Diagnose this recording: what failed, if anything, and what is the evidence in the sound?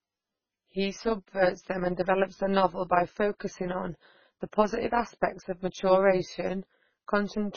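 A processing stage rebuilt the speech from windowed frames that don't sum evenly. Level swings by about 11 dB around 200 times a second throughout, giving an overlap-add ripple heard as metallic buzz.

Codec damage is heavy throughout. Nothing remains above 6.6 kHz, and the sound is watery and swirly. This is likely MP3 compression at a very low bitrate, around 16 kbps.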